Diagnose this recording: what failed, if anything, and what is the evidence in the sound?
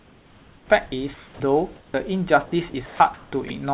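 Sound chopped by the voice detector, 0.0 to 1.4 s and 2.7 to 3.5 s: about 0.96 s and 0.38 s of speech become synthetic fill. This is likely call-processing gating, not packet loss, because the fill is steady noise.

Comfort noise in place of the background, 1.76 to 1.94 s: the room tone turns featureless and about 6 dB quieter, likely discontinuous transmission. A network dropout would leave silence or a glitch instead.

Onset clipped by the voice detector, 1.91 to 1.94 s: the first 30 ms are missing and speech jumps abruptly out of comfort noise, likely from slow voice detection. A codec fault wouldn't line up with the start of the sound.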